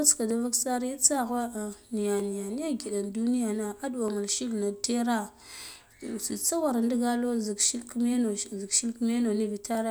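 From 0.31 s to 9.75 s, clock drift buffer slips produce about seven short clicks in the speech, spaced regularly at 1.89 s. These are likely caused by two independent clocks disagreeing by around 200 ppm, so the buffer periodically drops or repeats a small block of roughly 15 samples.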